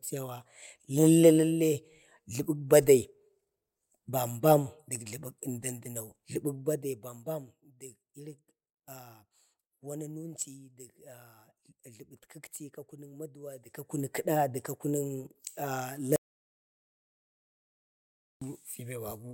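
A speech recording with two distinct faults. From 6.51 to 7.62 s the level falls by roughly 15 dB, but in coarse stair-steps, around a hundred a second, instead of a continuous ramp. Each jump adds a tiny click, so a fine ticking zipper noise rides on the voice while the gain moves. The steps and that zipping texture are what mark this one as unsmoothed. From 16.16 to 18.42 s there is an audio dropout to silence lasting 2.25 s. The speech cuts off abruptly mid-flow, and the gap is silent with no room tone at all, which sets it apart from a pause or a fade to a low level. It most likely comes from the input being lost, through a disconnect or stray mute, while recording carried on writing silence.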